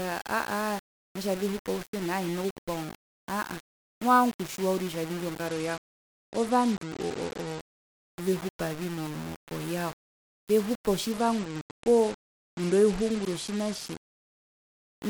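From start to finish the speech carries a grainy, rasping distortion that rises and falls with the voice itself. The softest syllables and decays break up, sputtering between steps or dropping out entirely rather than sinking into a steady hiss. The cause is likely low bit depth without dither. The error sits at about 15 dB below the signal, which fits rounding to around 5 bits. Unlike broadband noise, this grit is tied to the signal and disappears in silence.

From 5.47 to 7.80 s, and again from 11.12 to 14.66 s, the top end of the speech suddenly dulls and a separate coarse grit rises on top of the existing graininess. These are Bluetooth SBC bit pool drops. The link cut the bit pool from 31 to about 12, near 88 kbps, so the highest sub-bands receive little or nothing and the remaining bands are quantised coarsely. The quantisation grain runs throughout, but these episodes come with a loss of treble and last until full quality returns.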